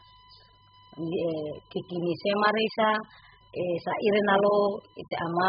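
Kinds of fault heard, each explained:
USB whine: A steady 1 kHz tone sits about 30 dB below the speech throughout, the signature of USB frame current leaking in through power or ground.
AAC compression: The speech sounds dull, smeared and warbly, with nothing above 5 kHz. This is likely heavy AAC-LC coding at a very low bitrate, around 8 kbps.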